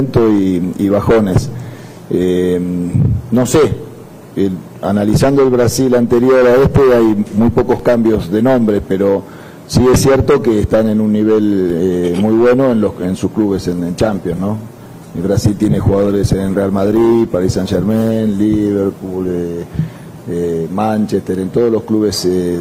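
An adaptive stream at a lower bitrate drops in from 13.4 to 19.4 s, likely a slowed connection; codec artefacts rise abruptly without a gap, consistent with roughly 64 falling to 16 kbit/s Opus.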